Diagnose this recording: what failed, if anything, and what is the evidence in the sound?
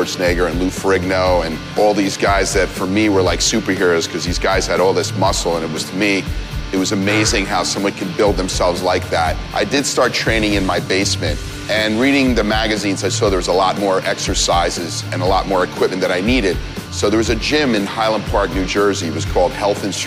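Nothing stood out on listening that would point to a failure at any stage of the chain.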